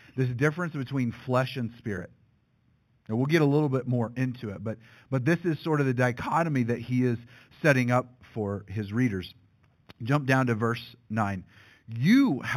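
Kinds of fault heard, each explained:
Imaging from linear upsampling: the speech sounds like it began at about 8 kHz and was raised to 48 kHz by joining samples with straight lines, so the band below 4 kHz is dulled at its top and a mirrored copy fills 4 kHz to 8 kHz, roughly 25 dB down, giving sibilants a faint metallic shimmer. Unlike aliasing, nothing folds down into the speech band, and unlike a clean low-rate source, the region above 4 kHz is not silent.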